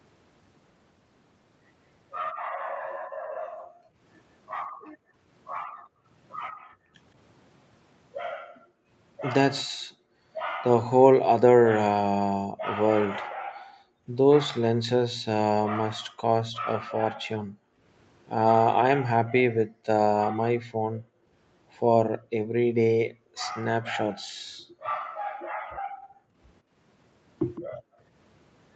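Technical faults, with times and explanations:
2.33–6.96, 8.35–10.22, 12.52–14.07, 15.95–17.84 and 19.57–28.03 s, background gated by the echo canceller: the room tone keeps dipping, at worst by about 40 dB, as the canceller slams the mic down while the far-end loudspeaker plays, then lets the ambience back once it releases.
27.55–27.61 s, echo leak: a brief, faint copy of the speech pops up about 161 ms late, roughly 25 dB under the main signal. It's likely leftover loudspeaker pickup that the far end's echo canceller didn't fully remove and sent back down the line.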